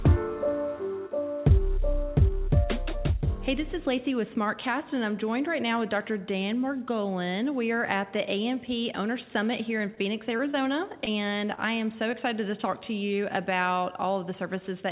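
Short concealed packet loss occurs at 9.78, 10.37, 10.51, 11.05 and 12.11 s. Each time about 20 ms of audio failed to arrive, and the receiver bridged the gap by extending the preceding sound before blending back, producing a brief smear or wobble where a short sound can vanish. Short stalls from a late packet fall at 9.95 and 11.55 s. The jitter buffer ran dry and the last sound was held for 18 ms and then 28 ms until the packet arrived, so nothing is lost but the sound drags with a slight buzz or dip. The whole clip is band-limited to 4 kHz, fitting a narrowband G.711-style call path.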